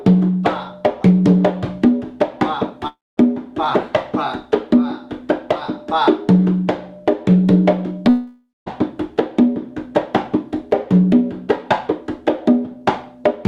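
At 2.87 to 3.19 s and 8.09 to 8.68 s the sound smears into a fading buzz, then goes quiet for about 0.2 s before resuming with roughly 0.3 s and 0.58 s lost, likely a long network dropout. Spectrograms show fading horizontal streaks, then blank gaps.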